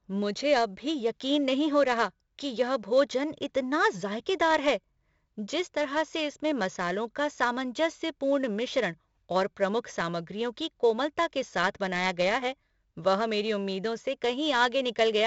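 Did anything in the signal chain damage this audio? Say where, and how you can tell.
Yes: 4-bit ADPCM compression at the codec stage, throughout. Gritty hiss rides every loud syllable, attacks distort, and nothing above 7.7 kHz, which fits a 64 kbps stream.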